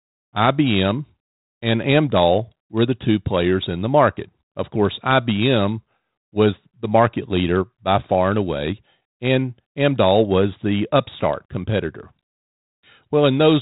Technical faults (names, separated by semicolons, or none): none